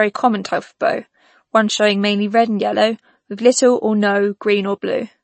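From start to end the speech sounds watery and swirly, with the treble gone above 8.3 kHz. This is likely MP3 compression starved of bits, as fits about 32 kbps.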